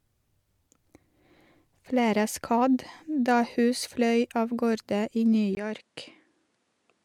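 At 5.55 s, after "av gårde i", a 20 ms gap, then duller, slightly quieter speech with nothing above 11.4 kHz: input likely switched to a poorer device.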